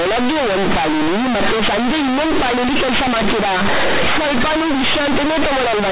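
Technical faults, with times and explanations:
Throughout: companded audio read as linear. The speech was stored as mu-law bytes but played as plain linear 8-bit samples without expansion, so every sign change swings the waveform across half its range. Quiet passages come out as loud as peaks, producing harsh, buzzy distortion and heavy noise in pauses.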